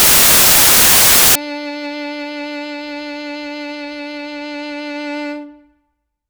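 From the start to about 1.35 s the music turns into samples built from the wrong bytes: the reader misassembles each sample, so fast-changing low bits become its largest part. This is heard as loud, harsh broadband noise, close to white on the loud sounds.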